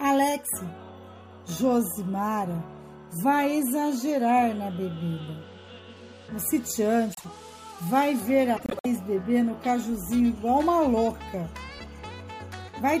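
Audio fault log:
7.13–7.25 s, frames out of order: two adjacent 26 ms blocks play swapped. This produces a brief garbled flutter. No time is lost.
8.56–8.86 s, frames out of order: two neighbouring blocks of about 104 ms play in exchanged order. This causes a longer garbled stretch. No time is lost.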